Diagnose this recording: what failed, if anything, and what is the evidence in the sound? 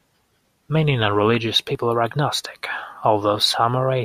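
At 1.75 s, just before "are agnostic", the speech jumps abruptly where the waveform breaks instead of flowing on. No gap of silence follows it; the sound simply skips ahead by a sliver of time, roughly 7 ms. That points to the driver or buffer stage, most likely a dropped buffer (overrun): the capture software fell behind, the hardware overwrote a block before it was read, and the two surviving edges were spliced together.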